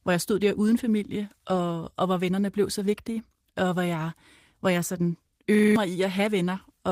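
At 5.55 s, just after "jeg hvor jeg sådan", a system hang loop runs until 5.76 s. The system stalled while the hardware replayed one 43 ms piece, which fits a 2048-sample buffer. It repeats five times at 23.4 Hz, a machine-gun stutter. About a fifth of a second of speech is lost.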